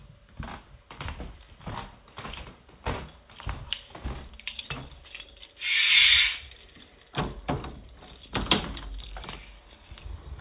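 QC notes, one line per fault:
No faults to note, one line: the sound comes through a 64 kbps G.711 A-law call path, with nothing above 4 kHz.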